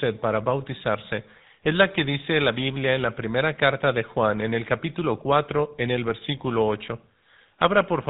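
Throughout, the speech sounds buzzy and gravelly with nothing above 3.8 kHz, the plainly audible damage of the GSM full-rate codec, whose coarse pulse excitation fits a 13 kbps stream.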